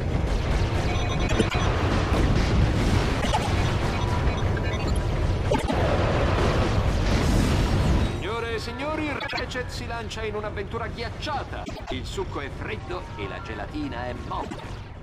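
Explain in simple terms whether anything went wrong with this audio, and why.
Frames out of order occur six times: at 1.28–1.55, 3.21–3.48, 5.51–5.73, 9.19–9.41, 11.65–11.92 and 14.42–14.63 seconds. Each time, two short neighbouring chunks of sound were played in swapped order, so the second part came before the first. Each swapped chunk lasts about a tenth of a second or a little less, which fits blocks of three or four frames. You hear a brief garbled flutter, but nothing is missing.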